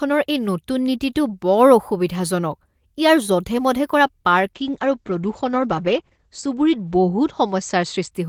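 A call bitrate drop runs from 4.55 s to 8.17 s. The encoder was starved of bits, fitting a fall from 32 kbps to 10 kbps, so the speech is coded coarsely and loses everything above 8 kHz, sounding rough and muffled at its worst for about 2.5 s.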